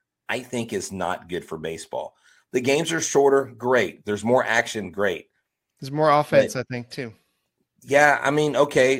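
No technical faults are audible.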